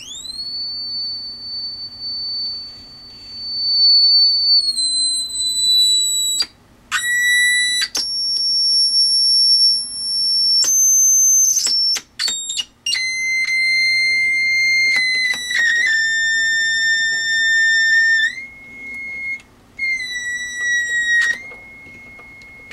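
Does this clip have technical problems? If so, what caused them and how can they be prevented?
No, nothing technical stands out here, so there's no problem to trace back or guard against.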